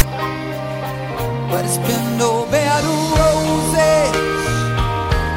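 At 0.0 s the audio opens with a file tags played as audio fault: a block of text metadata at the head of the file has been read as sample data. Because text bytes cluster in a narrow value range, it sounds like a loud rasp pushed off centre to one side, lasting only about 14 ms, with hard edges. That lopsided, gritty character separates it from a plain click or the even, full-scale white noise of embedded compressed data.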